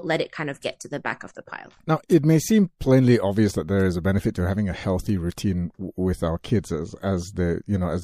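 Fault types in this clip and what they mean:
No fault types are present in this clip.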